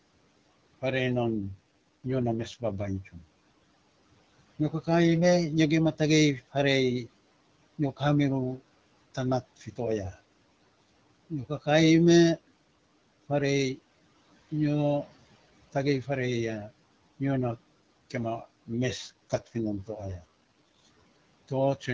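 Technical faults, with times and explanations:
1.24–2.91 s and 18.97–20.78 s, AMR rate drop: twice the speech turns rough and synthetic for just under two seconds, then recovers. The sound points to the AMR-WB codec falling from 12.65 kbit/s to 6.6 kbit/s. A weak radio link makes the network trade coding detail for error protection. The band stays the same and nothing goes silent. The vocal tract model simply gets fewer bits, so the voice turns raspy until the rate returns.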